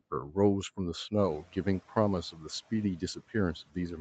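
Speech cut by the noise suppressor first appears at 0.11–0.37 s. The suppressor mistakes part of the speech for noise and turns it down by about 11 dB, so it sounds faint and swallowed.

At 1.18 s, just after the room noise rises, the noise suppressor is catching up. The louder background comes through briefly, then sinks by about 9 dB over 270 ms. On a spectrogram this shows as a broad noise band fading.

Further speech cuts follow at 1.42–1.66, 2.32–2.46, 2.97–3.35 and 3.66–3.77 s, dropping by about 11 to 18 dB. They show as sudden dips in the waveform envelope and thinned harmonics on the spectrogram.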